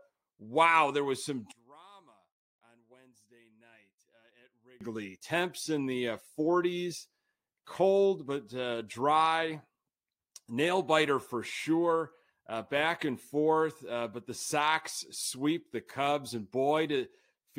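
From 1.51 s to 4.81 s, after "there was some", the speech falls by about 28 dB to a faint trace, likely one channel inverted, so the matching left and right signals cancel in mono. The waveform collapses abruptly, and the spectrogram nearly empties.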